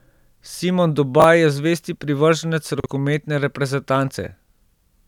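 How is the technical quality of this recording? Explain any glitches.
The recording has two brief ordering glitches, chunks out of order, at 1.2 to 1.24 s, just before "je zvesti privrženec", and at 2.8 to 2.86 s, just after it. Twenty-millisecond chunks were delivered late, by one chunk and then by two, and replayed after audio that should follow them. Nothing drops out, but each spot sounds like a tiny jumbled stutter in the speech.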